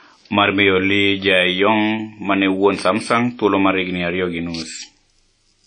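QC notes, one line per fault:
Throughout, WMA compression: the speech has a ringing, washy edge and a hiss that swells and fades with the voice, and nothing sits above 10 kHz, so the top end feels shut off. It's likely a WMA encode with long transform blocks smearing quantisation noise over tens of milliseconds, and the missing highs plus clearly audible damage fit a low bitrate around 32 kbps, where quieter spectral detail simply gets dropped.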